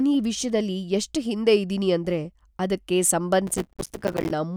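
Processor overload crackle, 3.47–4.31 s, after "ಹಿಂದೆ ಇದೀನಿ ಅಂದ್ರೆ ಅದಕ್ಕೆ": rapid missed processing deadlines leave tiny hard-edged silent gaps, heard as gritty tearing.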